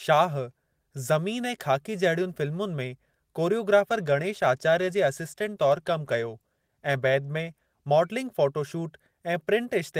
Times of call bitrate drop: 3.90-8.09

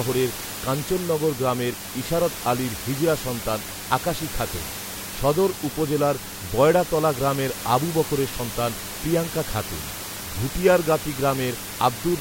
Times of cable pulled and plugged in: none

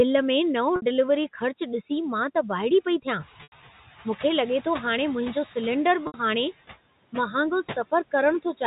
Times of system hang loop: none

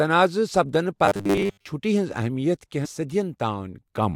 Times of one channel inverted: none

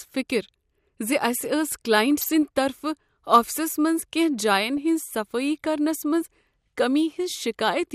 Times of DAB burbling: 2.18-2.29, 4.77, 6.77

